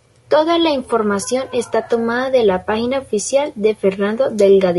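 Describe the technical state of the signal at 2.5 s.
At 2.5 s the speech carries low-delay AAC compression damage that runs through the whole clip: the voice sounds rough and grainy. The likely cause is AAC-ELD near 32 kbps, whose short frames resolve harmonics poorly. A spectrogram shows smeared harmonics, noise filling between them, and a thinned top band.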